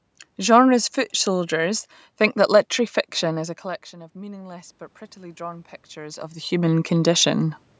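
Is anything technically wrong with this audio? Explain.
Yes. From 3.21 s to 7.58 s, after "soldiers think that literary", there is automatic gain rising. When the talker moved away, the input fell by about 19 dB, and the gain control slowly added about 8 dB. The voice and the room noise swell together over several seconds.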